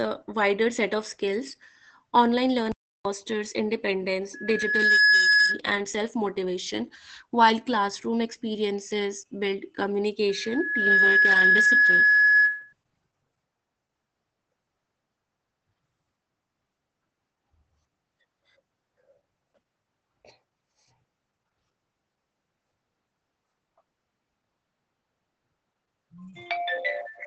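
Throughout, Opus voice compression in SILK mode leaves the speech muffled, slightly hoarse and robotic. Nothing sounds above 8.7 kHz, and the coarse coding fits a low bitrate around 12 kbps. At 2.72 s the sound halts into silence for 0.33 s. That points to a playback stall, likely a starved or blocked player. From 4.33 to 5.60 s and again from 10.29 to 12.73 s, a loudspeaker feedback squeal appears: a single 1.7 kHz tone swells over under a second to about 10 dB above the speech. Unlike a steady hum or whistle, it grows by itself through a microphone-loudspeaker loop.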